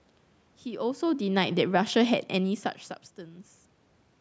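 From 1.04 s to 2.77 s the automatic gain falling fault is audible: the call's automatic gain control judged the input too loud or its background noise too strong and eased its gain down by about 4 dB over those 1.7 seconds. Because the reduction acts on the whole signal, the speech and the room noise behind it sink together. That shared drop separates it from the level shifts around 1 s and 2.5 s, where the talker moved relative to the microphone.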